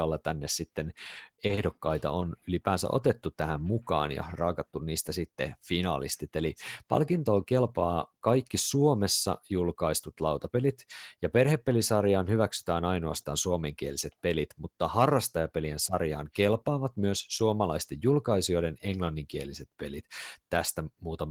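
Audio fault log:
1.47–1.51 s, 1.55–1.59 s and 2.19–2.23 s: short concealed packet loss. Three times, about 20 ms of the speech failed to reach the decoder in time, and the receiver covered each hole with 20 ms of synthesised continuation before blending back into the real signal. The result is a brief smear or wobble rather than a silent gap. A plain dropout would leave a hard cut to silence, and a click would be a sharp spike. Here, the sound carries on but is wrong for an instant.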